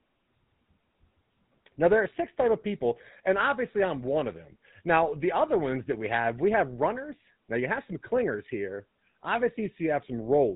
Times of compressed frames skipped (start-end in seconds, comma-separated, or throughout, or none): none